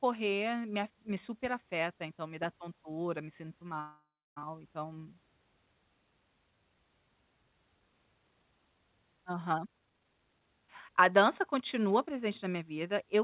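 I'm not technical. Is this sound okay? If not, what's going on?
No. There are two problems in this speech recording.

At 3.80 s, right after "dá tontura me sinto", there is a call audio freeze lasting until 4.38 s. The last sound is stretched out as a fading buzz or hiss and then goes quiet for about 0.3 s before the speech picks up exactly where it stopped. Nothing is lost, but the speech is now about 0.56 s later than before. This was likely caused by network packets being held up, so the receiver ran out of audio to play.

From 9.58 s to 11.49 s there is a jitter buffer speed-up. The receiver was holding more audio than it needed, so to catch up it repeatedly cut out tiny slices of sound, roughly half a second in total. The speech plays about 29% faster there but keeps the same pitch, so it sounds hurried rather than squeaky. Throughout the clip, the sound has the muffled phone-line quality of a call, with nothing above 4 kHz.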